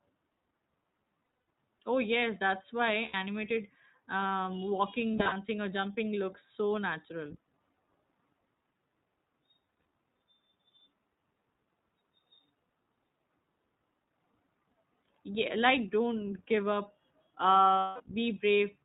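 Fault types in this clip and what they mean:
iLBC codec: The whole clip is narrowband speech, with nothing above 4 kHz. The codec codes each short frame's excitation on its own, without leaning on the frame before. The damage is plainly audible. The voice stays clear but sounds rough and somewhat synthetic. That grain fits iLBC's 15.2 kbps mode with 20 ms frames.
lost iLBC frames: Packets drop out at 1.24, 3.06, 5.13, 9.66 and 17.78 s. The decoder fills each gap by repeating the last pitch cycle mixed with noise. Each spot sounds like a held, faintly buzzy vowel. Each loss totals 80 to 220 ms, some scattered in short bursts. One falls between "um walking" and "or jumping looks so". The voice recovers almost at once, since each frame stands alone.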